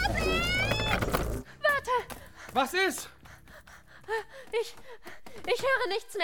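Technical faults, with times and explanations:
No technical faults can be heard in this audio. There is nothing here that calls for a time or an explanation.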